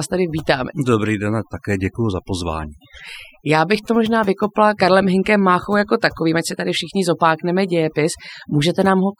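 From start to finish there's overdone noise removal. The noise reduction was pushed too hard, so bands sitting near its noise estimate get pulled right down, and quiet parts of the voice go with them. The background in the gaps drops and breaks up into little twinkling specks.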